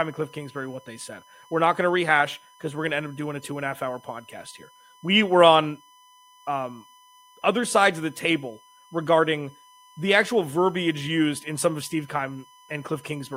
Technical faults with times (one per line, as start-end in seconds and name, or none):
0.00-13.37 USB whine